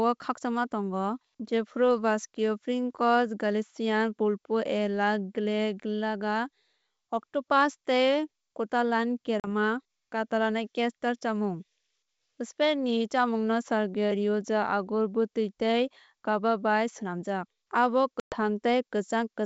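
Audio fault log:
9.40 s and 18.20 s: packet loss on an ADPCM call. Speech cuts to hard-edged silence for 40 ms, then 120 ms, which fits a couple of lost packets, then several. The G.722 decoder's predictor and step size drift, so each return distorts briefly.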